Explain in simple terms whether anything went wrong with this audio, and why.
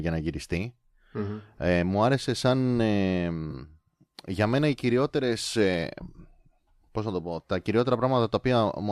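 Something did go wrong, briefly. At about 3.51 to 3.54 seconds the speech turns into a short smeared, noisy patch. This is AAC frame loss with concealment. A small piece of the coded audio, about 20 ms, never arrived, which fits two frames going missing. The decoder guessed the gap by reusing the sound just before it, with its detail scrambled. The gap is so short that it sounds like a blur, not silence. The sound is likely coming through low-delay AAC compression, as on a video call.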